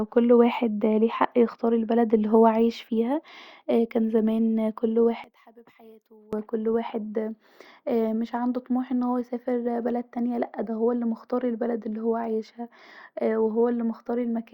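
From 5.24 to 6.33 s the speech suddenly drops by about 27 dB and turns faint, as if most of it vanished. That's likely one channel inverted, so the centred content cancels when the two sides are summed to mono, leaving only their faint difference.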